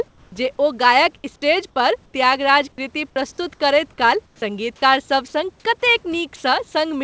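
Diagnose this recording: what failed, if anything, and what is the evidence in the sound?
Comfort noise in place of the background, at the call-processing stage: between phrases at 0.08–0.32 s, 2.06–2.14 s (between "स्टेज पर" and "त्यागराज कृति प्रस्तुत") and 4.26–4.42 s, the room noise becomes smooth and featureless and drops about 3, 8 and 4 dB. Discontinuous transmission likely stopped sending during the pauses. A dropout would go silent, not hiss.

Onset clipped by the voice detector, also in call processing: at 1.22 s, the start of "स्टेज पर त्यागराज कृति" begins abruptly. About 20 ms of its soft attack is missing and filled with synthetic noise, likely because the detector reacted late. A gate would leave silence there instead, not noise.

Sound dropped by the voice detector: just after "काल सङ्गीतकार", at 5.28–5.34 s, about 30 ms of sound turns into steady noise. At 6.36–6.44 s, 80 ms of sound is replaced the same way. 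The detector likely mistook quiet speech for background. Packet loss would glitch or smear the sound instead.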